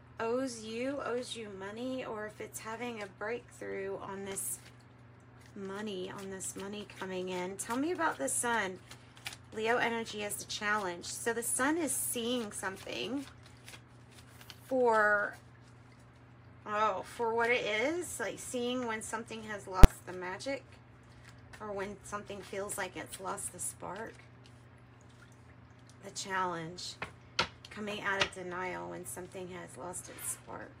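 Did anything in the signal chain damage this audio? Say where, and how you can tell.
Yes, there's a single loud bang at about 19.84 s. That's invalid numbers at full scale, and it happens where floating-point audio is converted to fixed-point. Some calculation upstream produced infinite or invalid values, and the conversion pinned them to the largest positive or negative sample. The output sits flat at one extreme value, far beyond the audio's peaks, for about 10 ms. Because the block is so short, the pops at its start and end blur into one sharp hit.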